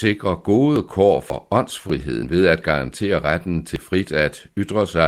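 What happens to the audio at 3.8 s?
At 3.76 s, right after "ved at garantere retten", the speech jumps forward, likely a dropped buffer (overrun), where roughly a tenth of a second was overwritten before it could be read and the two sides were spliced together. The waveform shows a sudden discontinuity, and the spectrogram shows a thin vertical broadband line with no gap.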